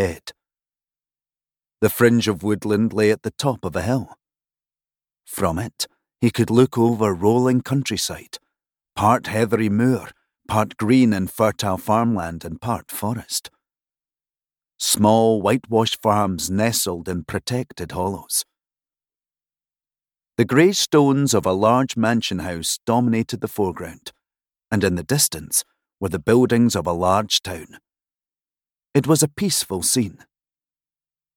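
Nothing goes wrong anywhere in this recording, so there's no fault to point to at any moment along the way.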